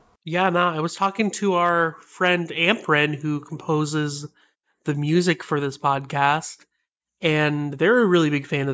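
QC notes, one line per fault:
No faults heard anywhere in the speech; nothing to log.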